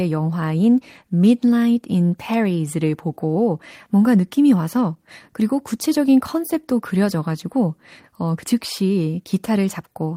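Nothing in the recording trips a fault at any point, so there's simply nothing to flag here.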